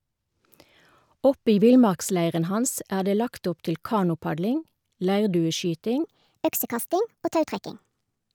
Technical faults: section at the wrong speed

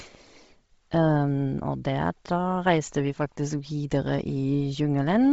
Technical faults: Bluetooth LC3 compression

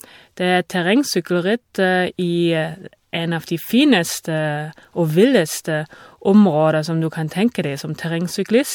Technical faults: generation loss

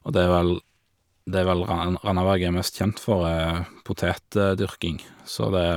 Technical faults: none

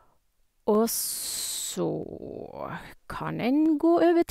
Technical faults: dropped samples

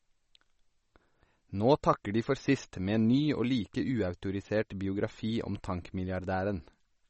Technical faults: MP3 compression

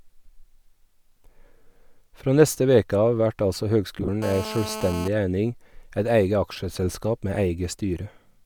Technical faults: lost LE Audio frames; GSM phone buzz

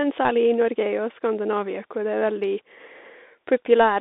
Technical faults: Bluetooth CVSD headset codec

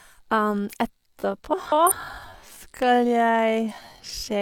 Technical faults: time-stretched section; frames out of order

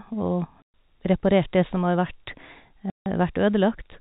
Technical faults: packet loss filled with silence

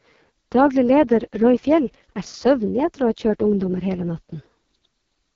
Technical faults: AMR wideband (HD Voice) codec

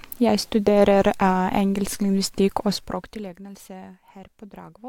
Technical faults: zipper noise

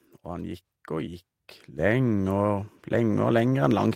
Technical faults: sudden gain jump

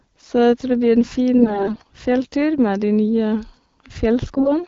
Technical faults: AMR bit errors

